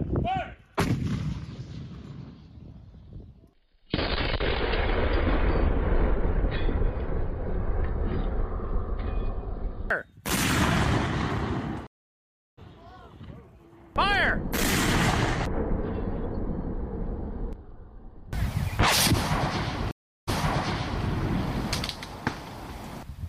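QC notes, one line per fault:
11.87–12.59 s, stream reconnect: 0.71 s dropout, then the audio resumes about 0.7 s further on as a fresh decoder restarts mid-stream. The waveform shows a flat gap, and the spectrogram a blank band with mismatched edges.
19.91–21.04 s, stream reconnect: 0.36 s of silence, then playback resumes 0.77 s earlier because a resent burst repeats material. The waveform shows a flat gap followed by repeated shapes, and the spectrogram a blank column with duplicated patterns.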